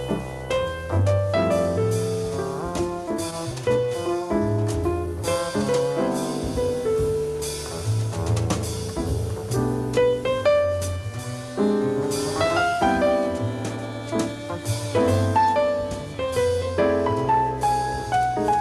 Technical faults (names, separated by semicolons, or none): skip ahead; jitter buffer speed-up